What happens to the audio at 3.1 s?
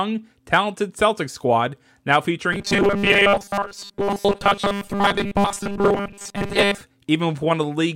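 At 3.1 s the speech is early in a stretch of robotic sound from repeated short buffers, running from about 2.53 s, just after "squad now", to 6.81 s. A rigid metallic buzz at 200 Hz sits over the sound for most of that span. That pitch matches a segment of about 5 ms being replayed over and over, likely because new audio arrived too seldom and the gaps were filled by looping the last buffer. Unlike a dropout or stutter, nothing falls silent and no chunk audibly restarts. The sound stays continuous, with a fixed mechanical pitch that still loosely tracks the speech.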